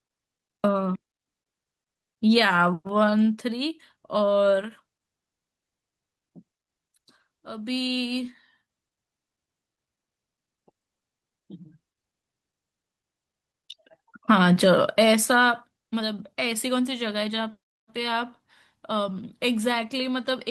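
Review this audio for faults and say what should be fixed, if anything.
Nothing needs fixing: the speech comes through a call path with a top end that stops around 12 kHz, which points to a wideband voice codec such as Opus at a modest bitrate, and no faults are audible.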